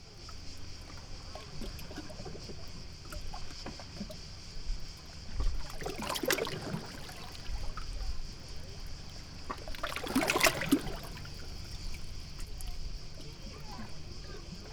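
No technical faults can be heard anywhere in this audio; the signal stays intact throughout.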